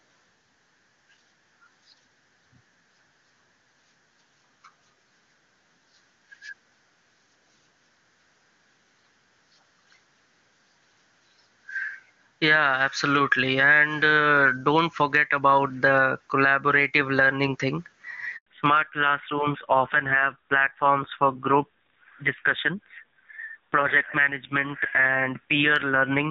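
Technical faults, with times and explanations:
Throughout: gain pumping. Loud and soft parts end up closer in level and the sound is squashed, a level swing of roughly 15 dB. This is likely caused by a mic gain set far too high, with a fast limiter pulling it down on every peak.
18.37–18.47 s: handover gap. Right after "the collaborative learning thing", the sound dies away within a few tens of milliseconds and stays silent for 100 ms while the call switches networks. No frames arrive during the switch, so whatever was said then is lost. This is a clean hole, not a stutter or a repeated fragment.
18.47 s to the end: fallback to narrowband. The earlier HD Voice sound, with its crisp band up to 7 kHz, gives way to audio with nothing above 4 kHz, duller and rougher from here on. The rasp points to a low-rate narrowband codec. This is a lasting change of bandwidth, not a brief muffle.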